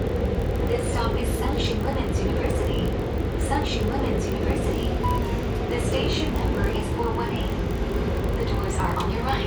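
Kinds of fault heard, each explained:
block size mismatch (padded): each block ends in a tiny zero-padded gap, giving a steady 43.1 Hz buzz that fits 1024-sample blocks, with timing barely slowed.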